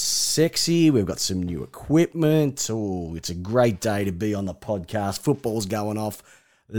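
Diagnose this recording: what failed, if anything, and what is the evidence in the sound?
Nothing in the speech stood out as a fault on listening, so no failure at any stage can be pointed to.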